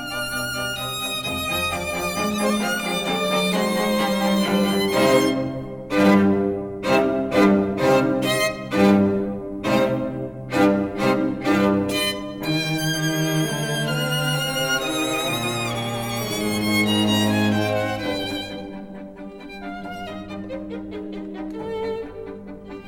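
No technical faults are audible anywhere in this recording.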